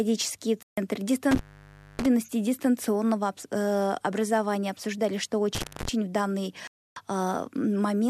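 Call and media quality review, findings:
Digital broadcast dropout, 0.63–0.78 s: receiver lost sync or frames failed checksum; decoder muted. Speech cuts to silence for about 144 ms, consistent with six 24 ms frames discarded. Content in that gap unrecoverable.

Digital broadcast dropout, 6.67–6.97 s: same receiver-side mute on corrupted frames, longer run. Hole of about 288 ms, fitting twelve lost frames; speech resumes once valid frames return.

Intermittent contact, 1.31–2.06 s: loose plug or cable on the analogue path opening momentarily. Line open about 0.60 s; crackle at break and reconnect, faint hiss in between instead of speech.

Intermittent contact, 5.55–5.88 s: contact fault recurring. Open for about 0.21 s, crackle on both edges, speech replaced by low hiss while the circuit is broken. Reseat or replace the connector.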